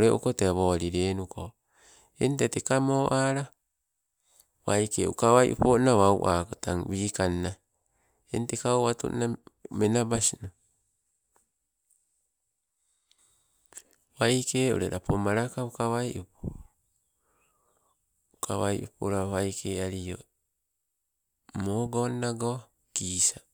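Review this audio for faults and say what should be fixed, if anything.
Nothing to fix: no faults can be heard anywhere in this speech recording.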